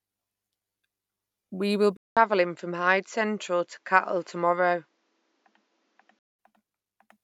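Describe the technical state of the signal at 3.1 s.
At 3.1 s you're in the middle of a stretch from 1.97 s to 6.39 s where the input most likely switched to a poorer device. The sound drops out for about 200 ms at the change, then comes back duller and boxier, with nothing above 7.6 kHz. The level stays roughly the same, but a faint new background noise sits well down, around 50 dB under the speech. That's the other device's narrower band and its own noise coming through.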